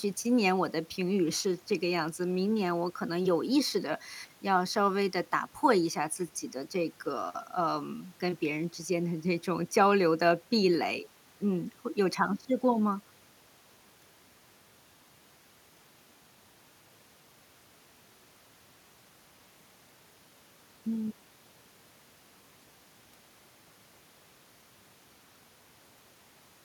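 No technical faults can be heard anywhere in the speech recording; the signal stays intact and continuous throughout.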